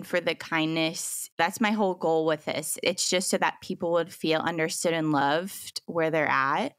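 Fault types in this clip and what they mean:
No technical faults are audible anywhere in the speech recording.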